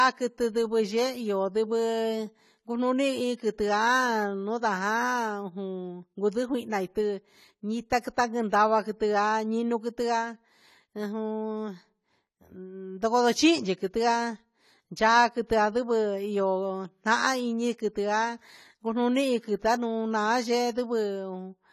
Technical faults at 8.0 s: AAC compression

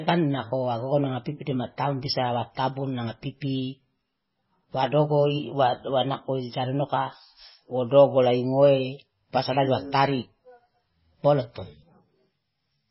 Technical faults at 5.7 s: MP3 compression

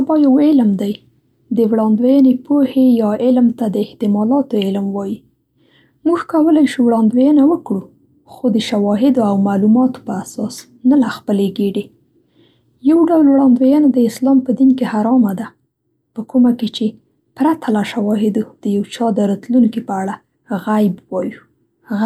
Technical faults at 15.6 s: none

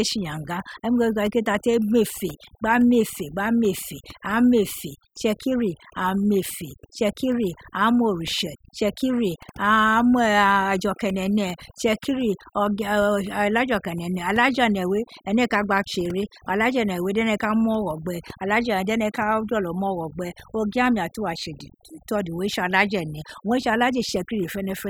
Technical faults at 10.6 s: overdone noise removal

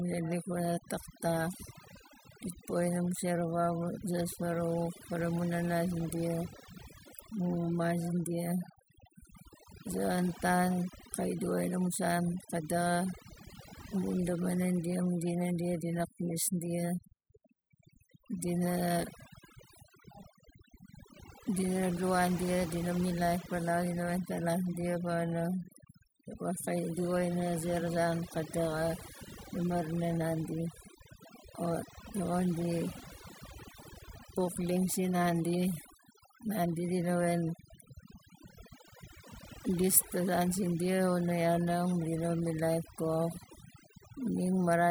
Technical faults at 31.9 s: overdone noise removal

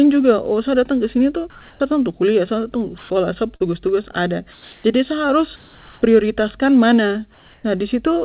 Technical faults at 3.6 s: short concealed packet loss

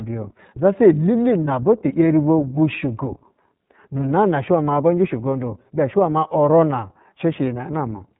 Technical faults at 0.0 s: iLBC codec

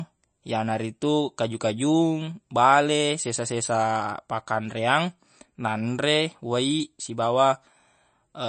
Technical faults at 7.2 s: MP3 compression

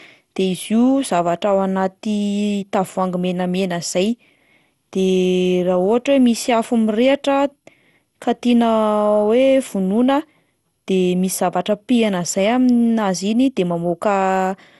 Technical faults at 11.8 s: generation loss

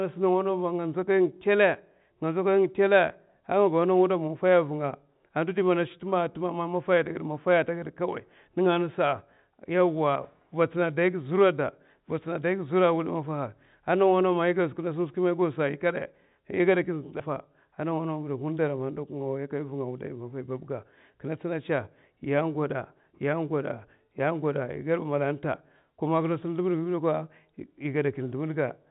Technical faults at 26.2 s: none

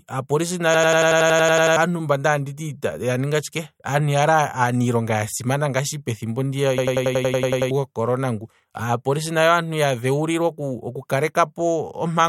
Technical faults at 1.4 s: system hang loop

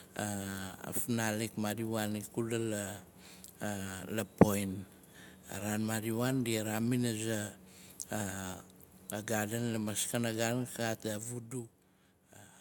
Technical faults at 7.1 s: none

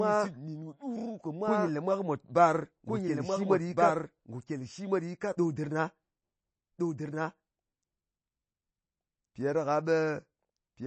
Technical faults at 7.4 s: doubled audio track; MP3 compression

